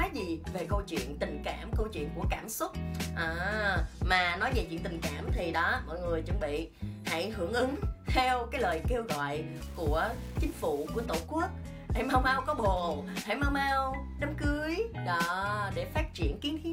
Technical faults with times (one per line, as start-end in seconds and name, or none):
9.56-11.06 low bit depth without dither